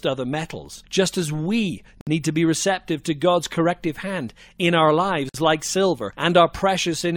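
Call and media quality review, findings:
Gap at a join of encoded pieces: silent dropouts of 58 ms at 2.01 s (after "as we") and 52 ms at 5.29 s (after "corrective hand in our"). Encoder start delay and last-frame padding left untrimmed.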